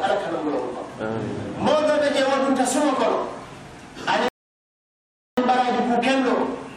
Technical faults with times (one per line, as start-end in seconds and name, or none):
4.28-5.37 rebuffering stall